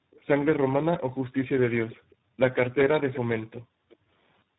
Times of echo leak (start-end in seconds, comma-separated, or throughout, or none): 0.11-0.21, 1.90-2.15